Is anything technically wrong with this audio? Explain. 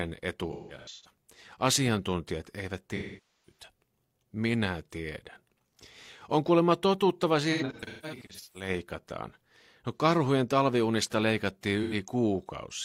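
Yes. This speech clip has AAC frame loss with concealment in four places. From 0.52 to 1.11 s, about 384 ms of audio is missing in short gaps, the longest around 150 ms. From 2.95 to 3.64 s, 512 ms is lost. After "kuulemma totuttava", from 7.52 to 8.69 s, about 683 ms is lost in scattered gaps. After "karhujen talviunista leikattiin", at 11.82 to 11.94 s, 85 ms is lost. The decoder rebuilds each gap from the last good spectrum, so the short gaps sound like a smeared, noisy, phasey patch rather than clean speech.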